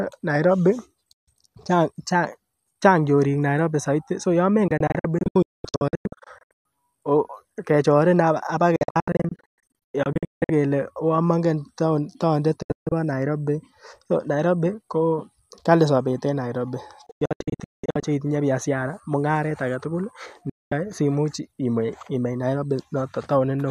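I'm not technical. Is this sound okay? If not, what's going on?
No. The speech has a digital broadcast dropout. The receiver loses good signal and goes silent, then resumes later. It happens at 1.13, 4.68 to 6.65, 8.76 to 10.50, 12.62 to 12.92, 17.06 to 18.03, and 20.50 to 20.72 seconds. The longer stretches are several short gaps. Whatever was said in the gaps is lost.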